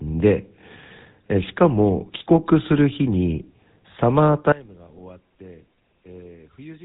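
Throughout, the speech passed through the GSM full-rate codec, consistent with a 13 kbps stream; nothing survives above 3.9 kHz, leaving a plainly buzzy, gravelly roughness. From 4.52 s to the end, the level collapses by about 24 dB, likely from one channel inverted cancelling the centred voice in mono, leaving only a faint residue.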